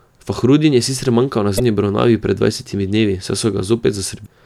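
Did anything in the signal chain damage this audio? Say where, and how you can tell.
Yes. Brief glitches at 1.56–1.60 s and 4.22–4.27 s mark damaged data in a compressed stream: the decoder lost frame sync and resynchronised.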